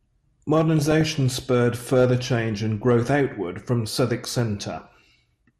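DAB burbling runs from 0.79 to 1.20 s in this speech clip, just before "spurred further change and". It is a patch of short noise blips in single sub-bands, which points to bit errors, at a rough rate of a few per thousand, slipping past error correction and corrupting the audio data across a run of frames. MP2 compression colours the whole clip: the sound is dull, with a granular, gurgling edge and upper bands flickering in and out, likely from MPEG Layer II coding starved of bits, which fits a rate around 80 kbps.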